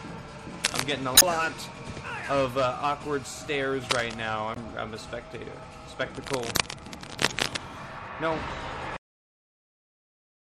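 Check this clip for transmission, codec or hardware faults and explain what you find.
Four faults are present: codec damage throughout, three scratching bursts, three decoding glitches, and an abrupt cut-off.

Throughout, the audio sounds watery and swirly, with dulled treble and smeared attacks, likely MP3 compression at a low bitrate near 64 kbps. The damage is steady rather than in bursts.

From 0.62 to 0.83 s, 3.89 to 4.14 s and 6.15 to 7.57 s, cable scratch noise appears as uneven rustling bursts, about as loud as the sound itself. Changing contact resistance in a moved connector would explain it. Unlike decoding glitches, it is broadband grit with no jump in the audio.

From 1.14 to 1.23 s, 4.54 to 4.57 s and 7.29 to 7.32 s, damaged data in a compressed stream causes short chirps and blips. The decoder loses frame sync and has to find the next frame. The last of these falls inside the third scratch burst.

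At 8.97 s, a cut-off end drops the audio straight to digital silence mid-sound, with no decay. The final buffers never played. This differs from a fade because nothing tails off.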